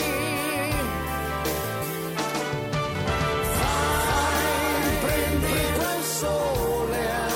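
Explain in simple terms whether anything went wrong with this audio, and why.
A doubled audio track runs from 2.95 to 5.77 seconds. During that stretch you hear everything twice: a second copy trails the original by roughly half a second and is about as loud, so the two overlap like an echo that never fades. The copy begins and ends abruptly. This likely happened because the same sound was recorded a second time through a slower path, or an edit left two copies out of step.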